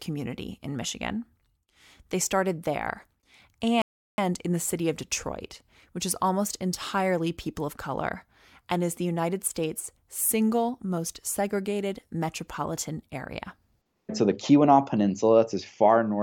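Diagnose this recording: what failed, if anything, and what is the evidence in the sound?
A rebuffering stall at the playback stage. At 3.82 s the speech drops to complete silence and holds until 4.18 s, then picks up exactly where it broke off, with no skipped material and no repeated audio. The player's buffer of downloaded audio ran dry, so output paused until enough new data arrived to continue. The gap inserts about 0.36 s of dead air, lengthening the clip rather than removing any sound.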